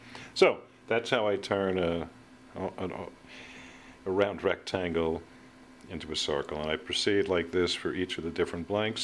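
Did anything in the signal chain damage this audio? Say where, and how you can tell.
No, nothing in the signal chain has audibly damaged this audio. No stage, from capture through to playback, leaves a mark I can hear.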